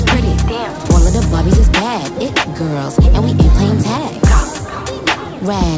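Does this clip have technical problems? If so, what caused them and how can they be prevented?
No, there are no technical problems to report.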